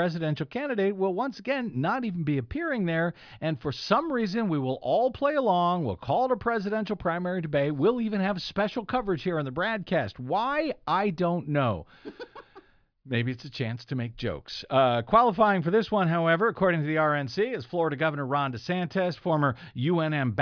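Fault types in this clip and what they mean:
No technical faults can be heard anywhere in this speech recording, and the signal stays steady and intact throughout.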